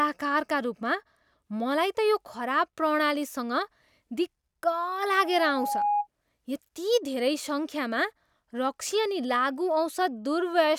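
Loudspeaker feedback squeal runs from 5.05 to 6.07 s in this speech: a microphone re-captures its own loudspeaker, and at 826 Hz the loop gain passes unity, so that tone feeds itself, swelling over most of a second into a squeal roughly as loud as the speech.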